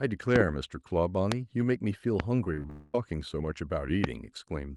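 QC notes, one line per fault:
0.36–0.43, 1.32–1.34, 2.20–2.22 and 4.04–4.06 s, loud pop: Each of these brief spans has a sharp pop or thump sitting on top of the speech, which carries on underneath. The first span holds two pops in quick succession and each later span holds one, all peaking about 20 dB above the speech. The likely cause is an electrical step or spike, from a plug, switch, static discharge or driver glitch, that the following circuitry shaped into a short, hard click.
2.44–2.70 s, repeated packet loss (robotic sound): Six short holes open up in quick succession, the longest about 20 ms, with roughly 70 ms of audio lost in all. The receiver fills each hole by stretching out the last bit of sound it had, using about 96 ms of this patched sound, which is over a third of the stretch. With the patches coming one after another, the speech turns choppy, with pieces audibly gone.
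2.70–2.95 s, long network dropout: Right after the choppy stretch, about 230 ms of audio never arrives, most likely because of a longer network outage. The receiver covers the whole gap by continuing the last sound as a fading buzz or hiss, so there is no clean silence. The speech then resumes further along, and the missing portion is simply skipped rather than delayed.
2.97–3.42 s, jitter buffer speed-up: Just after the dropout, the speech runs about 7% fast at an unchanged pitch. Delayed audio arriving together overfilled the receive buffer. To bring the delay back down, the receiver cut short slices of one or a few pitch periods many times in a row, removing about 40 ms in total. The result sounds slightly hurried and rushed rather than higher in pitch.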